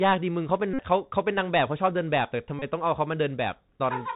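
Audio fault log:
throughout: Bluetooth CVSD headset codec. The speech is band-limited to 4 kHz, with sibilants turned scratchy and a grainy hiss under everything, the sound of a one-bit delta coder, fitting 64 kHz CVSD, whose step size can't keep up with fast high-frequency detail. A spectrogram shows a hard ceiling at 4 kHz and a speckled noise floor.
0.74–0.80 s and 2.59–2.64 s: Bluetooth headset packet repeated. Lost packets were replaced by replaying the previous packet's bits, giving a brief buzz near 267 Hz, about 52.5 ms then 26.2 ms long. The waveform shows identical 3.75 ms segments, and the spectrogram shows evenly spaced harmonic stripes.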